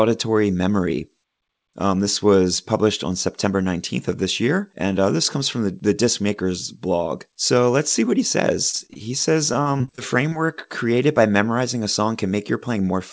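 Right after "let's see what he", from 8.70 to 8.97 s, and again from 9.53 to 10.33 s before "created by memorizing a", repeated packet loss leaves choppy, robotic speech with gaps patched by stretched sound. Unlike a single dropout, the holes keep recurring. From 12.23 to 12.93 s, following "by memorizing a song", a jitter buffer speed-up trims roughly a twentieth of a second. The speech runs at about 107% speed but keeps its pitch, so it sounds hurried rather than higher. Throughout, the band stops at 8 kHz, which fits a G.722 call path.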